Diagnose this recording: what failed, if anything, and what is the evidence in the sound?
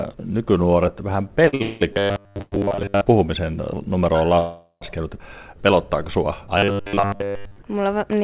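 Short stalls from late packets in the network/jitter buffer: right after "nykynuoret vähän", sound is held about 48 ms at 1.48 s, then 52 ms at 1.55 s, with nothing lost.

Call audio freezes at 1.62–1.83 s, 2.42–2.54 s, and 4.39–4.83 s after "puhumisen numero on": held sound fading toward near-silence, then resuming, likely packets delayed in the network.

Robotic sound from repeated short buffers, 1.93–3.01 s and 6.58–7.58 s: a rigid 100 Hz metallic buzz, likely a driver/buffer repeating 10 ms chunks, covering most of the audio.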